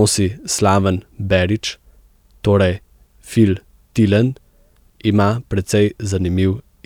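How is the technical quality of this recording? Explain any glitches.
No technical glitches can be heard anywhere in this speech recording. No moment in the audio stands out as a technical problem that needs explaining.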